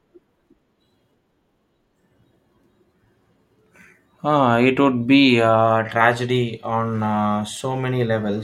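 Nothing stood out as a technical problem on listening to this speech recording.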